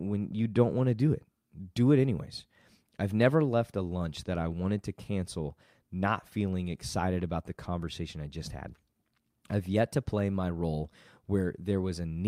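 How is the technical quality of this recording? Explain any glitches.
No glitches turn up anywhere in the recording. The speech runs on without any break or disturbance to point to.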